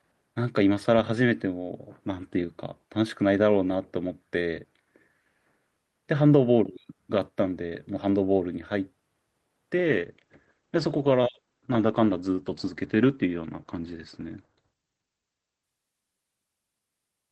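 At 9.78 s a call bitrate drop sets in and lasts to the end at 17.32 s. The encoder starved of bits, consistent with a fall from 48 to 12 kbps, codes the speech coarsely and turns it rough and muffled. A spectrogram shows content above 8 kHz abruptly vanishing.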